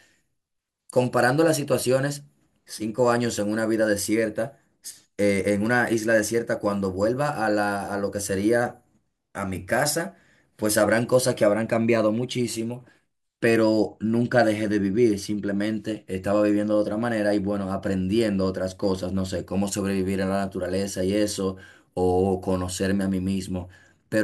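A speech recording with nothing technically wrong to hear anywhere along its run, so there's honestly nothing here to flag.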